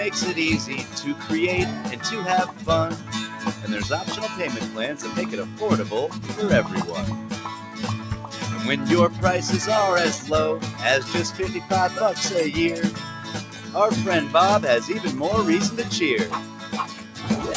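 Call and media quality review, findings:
Noise suppressor applied to non-speech sound: speech-tuned suppressor left on across the whole clip, level pumping and swinging by roughly 10 dB as it treats held tones and tails as noise. Nothing over 8 kHz, consistent with the G.722 wideband call path at what sounds like 64 kbps.

Sound cut by the noise suppressor: dips of about 5 to 6 dB at 0.84–0.99, 2.5–2.65, 5.44–5.6, 7.61–7.8, 12.92–13.75, 16.4–16.69 and 16.89–17.18 s. Sustains and decays get clamped and attacks survive, so gain is being pulled on steady content.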